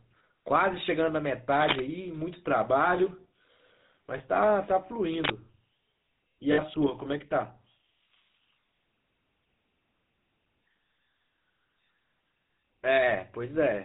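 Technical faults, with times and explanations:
Throughout: GSM full-rate codec. The speech passed through a coder that models the vocal tract from a sparse pulse excitation, which fits roughly 13 kbps, so it has a buzzy, gravelly roughness and nothing above 4 kHz.
1.59 to 1.80 s and 5.14 to 5.32 s: cable scratch noise. A connector or lead likely shifted, its contact resistance jumping, laying uneven scratchy bursts over the speech at roughly the same loudness.
4.18 to 4.21 s and 6.52 to 6.60 s: lost GSM frames. Missing frames, about 20 ms and then 60 ms, were filled by repeating the last good frame, leaving a brief rough, metallic ring.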